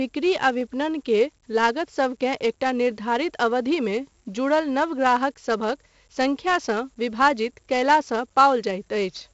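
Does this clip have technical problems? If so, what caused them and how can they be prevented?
Yes. 4-bit ADPCM compression leaves a gritty hiss that rises and falls with the speech and roughens sharp attacks. Unlike steady background noise, it vanishes in pauses. Prevent it by recording or exporting to uncompressed PCM, or to a modern codec at an adequate rate.

Single sharp clicks at 0.61, 4.32 and 6.63 s are likely dropped samples. A tiny fraction of a millisecond is lost, so no sound goes missing, unlike a dropout's audible gap. Prevent them with larger audio buffers and a stable clock between devices.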